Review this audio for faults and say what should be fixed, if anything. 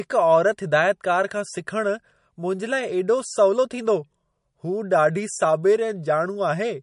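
The speech is band-limited with nothing above about 10.6 kHz, and the compression damage is plainly audible for the whole clip: a watery, swirling texture and smeared consonant edges. This is likely MP3 compression at a low bitrate, roughly 40 kbps. Starved of bits, the encoder discards the top band outright and drops quiet spectral lines, which flicker in and out between frames and produce the swirl. To prevent it, keep an uncompressed or lossless master and encode MP3 at a much higher bitrate.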